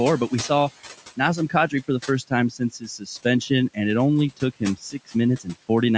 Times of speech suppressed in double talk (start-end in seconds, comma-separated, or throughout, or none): none